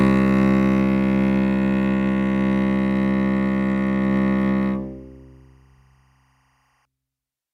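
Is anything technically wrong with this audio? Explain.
Yes. From 2.53 s to 6.85 s there is timecode bleed. Linear timecode from a neighbouring track or cable leaks into the music. Its square wave flips between tones near 1 and 2 kHz, at 23.976 frames per second. It sits far below the music, a faint chirping warble.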